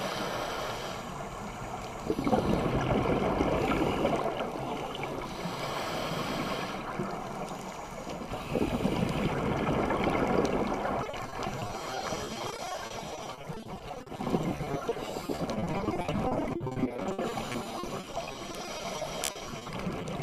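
From 11.03 s to 20.04 s the audio breaks into repeated packet loss, with a robotic, choppy sound. Roughly a third of that stretch is patched by extending earlier sound, in gaps up to 60 ms.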